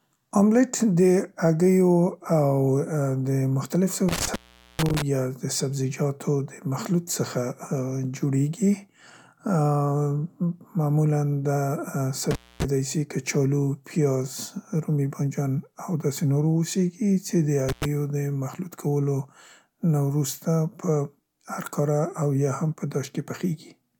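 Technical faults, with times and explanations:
4.09–5.02 s, 12.31–12.64 s (just before "سي کچالو") and 17.69–17.85 s, intermittent contact: a loose connection opens briefly, cutting the speech for 0.43, 0.25 and 0.10 s, with crackle at each edge and faint hiss in the gaps.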